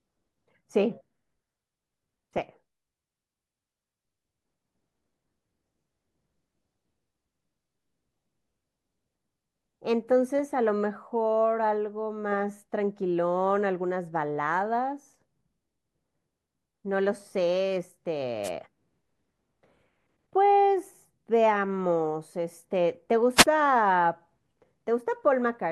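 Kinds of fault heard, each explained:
Wireless microphone noise hit: the analogue FM radio link briefly faded as reflected signals cancelled, letting receiver noise surge over the speech. It is heard as two short bursts of static swish, at 18.43 s for about 70 ms and 23.36 s for about 95 ms.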